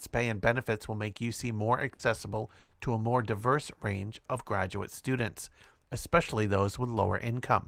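Burst of packet loss at 1.93 to 2.02 s and again at 2.59 to 2.74 s: in each case a short run of packets never arrived in time, so the receiver stretched the last received sound across the gap, about 60 ms the first time and 120 ms the second, letting it fade. The speech briefly turns into a held, dimming buzz or hiss, then resumes with that stretch of speech skipped.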